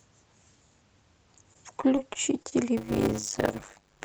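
From 1.53 to 2.54 s the speech breaks up with repeated packet loss, producing a robotic sound. Six gaps fall across this second, each patched by extending the preceding sound. About 125 ms in total is filled this way, and about 40 ms is simply missing. No single hole exceeds 27 ms, but together they conceal roughly an eighth of the span. The result is choppy, with pieces missing.

From 2.77 s to the end of the clip, a block size mismatch with zero padding takes over. One stage delivers short blocks, consistent with 256 samples, into a stage that reads larger ones, and the remainder of each block is zero-filled. That gap recurs at 100 Hz, heard as a steady buzz over the speech. Stretching every block this way plays the audio at 0.533 times normal speed, while the timbre stays.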